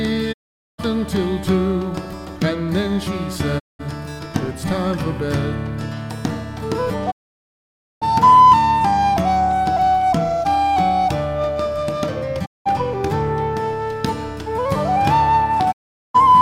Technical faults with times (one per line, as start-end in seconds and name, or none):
0.31-0.80 digital broadcast dropout
3.58-3.81 digital broadcast dropout
7.10-8.03 digital broadcast dropout
12.44-12.67 digital broadcast dropout
15.71-16.16 digital broadcast dropout